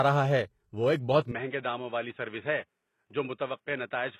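From the start, the treble above the lower band sounds rebuilt rather than recorded, which points to HE-AAC compression. Spectral band replication likely copies lower bands upward under a coarse envelope, so the top end reaches up to about 12.3 kHz but its harmonics don't line up with those below the crossover. The damage is plainly audible and fits a low bitrate around 16 kbps. Unlike a plain low-pass cut, treble is present, just synthetic.

At 1.31 s, right after "ہے وہ ایک بہت", the sound abruptly narrows and stays that way to the end. This is most likely the input switched to a poorer device: nothing survives above about 3.8 kHz, the level drops by around 5 dB, and a new background noise appears well below the speech. There is no silence at the switch. What separates it from the codec fault is that the change begins at one moment rather than running throughout.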